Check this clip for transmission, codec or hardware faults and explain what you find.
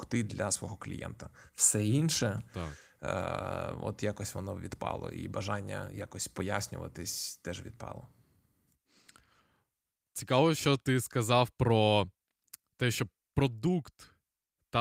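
No transmission, codec or hardware faults.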